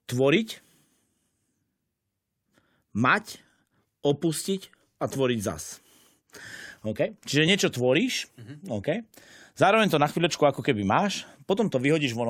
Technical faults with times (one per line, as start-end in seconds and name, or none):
none